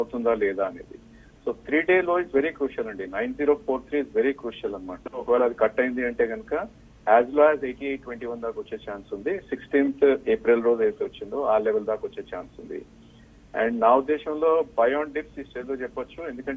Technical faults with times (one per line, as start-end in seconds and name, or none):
none